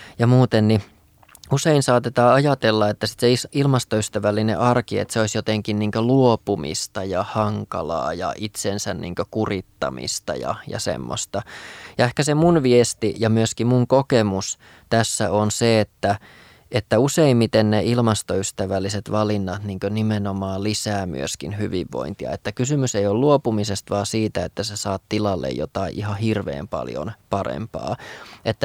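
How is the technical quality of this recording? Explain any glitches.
No technical faults are audible anywhere in the recording.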